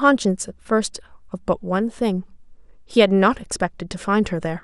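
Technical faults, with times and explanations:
Throughout: MP2 compression. The speech sounds dull and plainly gurgling, with a granular edge in the upper range, likely from MPEG Layer II coding at a low rate. The sound suggests roughly 80 kbps, where too few bits shut off upper sub-bands and coarsely quantise those left.
3.44 to 3.56 s: DAB burbling. A short burst of burbling distortion rides over the speech for just over a tenth of a second. Bit errors got past error correction, corrupting samples across what sounds like about six frames, so single sub-bands get short blips of noise.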